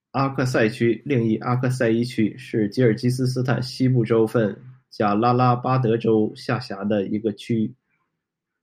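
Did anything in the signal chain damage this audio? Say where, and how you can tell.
No, nothing in the chain damaged it.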